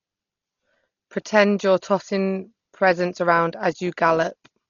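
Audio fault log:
throughout: Dolby Digital compression. The speech sounds dull and muffled, with nothing above 6.9 kHz, and a rough, fluttering noise clings around the voiced tones. This is likely heavy AC-3 style coding at a very low rate, which fits a 32 kbps stream. The encoder cut the band short and left many frequency lines with no mantissa bits, so the decoder filled them with dither noise that rasps and flickers from block to block.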